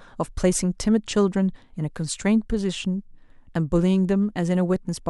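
A speech recording whose signal carries no audible technical fault anywhere in the clip.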